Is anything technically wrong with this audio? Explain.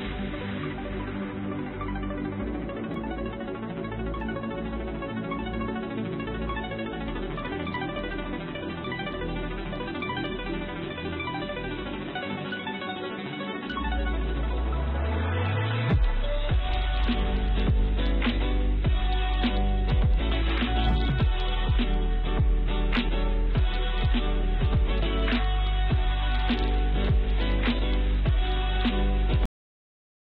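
Yes, there is a cut-off end. At 29.46 s the final buffers were never written or played out, so the sound stops mid-event and falls straight to digital silence with no natural decay. That silence fills the last 0.9 s of the clip.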